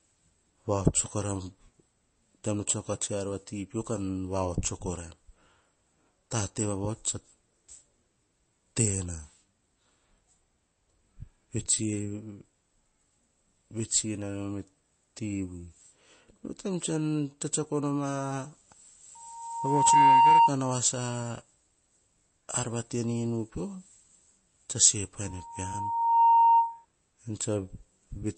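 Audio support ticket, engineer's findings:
Whole clip: treble gone above 8.3 kHz, speech watery and swirling, metallic chirps on s sounds. Likely MP3 compression starved of bits, fits a 32 kbps bitrate. Swirling from frame to frame, not a clean dull roll-off, rules out plain low-pass filtering.

19.15–20.54 s and 25.24–26.85 s (just after "tse se"): single 926 Hz tone swelling in under a second, then about a second, reaching about 15 dB, then about 10 dB, above speech. Loudspeaker feedback squeal: microphone picks up its own loudspeaker, loop gain exceeds one at 926 Hz. Self-building swell at the same pitch both times rules out a steady hum or an inserted tone.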